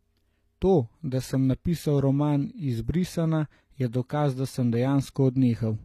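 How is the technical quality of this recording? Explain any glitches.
The recording is clearly degraded by compression across its whole length.

HE-AAC compression, throughout: likely this codec, since the treble is rebuilt by copying lower bands upward instead of being coded, so harmonics misalign above the crossover. The s sounds turn gritty and metallic, nothing is heard above 15.5 kHz, and the damage is consistent with a low bitrate around 24 kbps.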